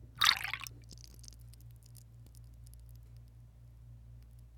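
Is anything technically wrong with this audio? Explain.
No technical faults are audible.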